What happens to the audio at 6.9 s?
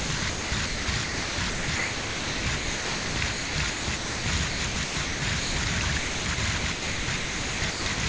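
From 5.98 to 7.98 s the sound is choppy, likely chopped by the voice detector, with about 1.4 s swapped for comfort noise: flat, featureless hiss in the spectrogram, low steady waveform.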